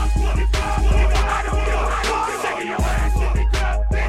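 From 0.61 to 2.55 s a doubled audio track appears, likely from a second capture path: a full-volume copy trails by about 0.7 s, abruptly starting and stopping with no decaying echo tail.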